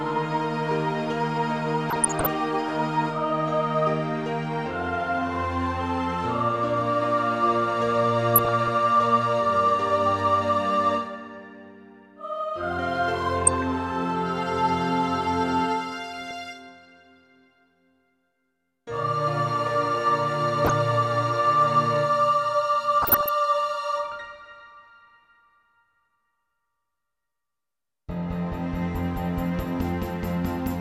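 DAB burbling bubbles up at 1.90–2.26, 8.36–8.68, 13.45–13.63, 16.14–16.31, 20.65–20.92 and 23.02–23.29 s: a fraction of a percent of bit errors slipping past correction, putting short blips of noise in single sub-bands.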